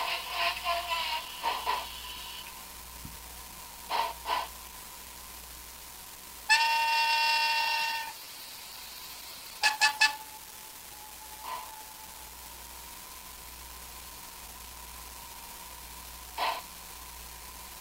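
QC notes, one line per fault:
throughout: unreliable data bit. A steady crackle and fizz sits under the whole sound and carries straight on through the pauses, so it does not come from the source itself. One data line in the path is marginal, and in a random share of samples its bit flips. Each flip adds a spike of exactly the same size. Scattered irregularly in time, these identical spikes blur together into a constant granular hiss-crackle.
7.6–10.1 s: call bitrate drop. The sound turns rough and watery and loses its top end. It stays dull and smeared until just after 10.1 s, then clears. The call's bandwidth estimate fell, and the encoder was told to go from 64 kbps down to 11 kbps. It held the lowest rate for about 2.45 s. Opus coded everything more coarsely at that rate and cut off the high frequencies, which gives the muffled, gurgling texture.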